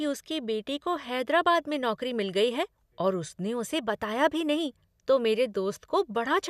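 Nothing stood out as a technical fault on listening to this speech recording.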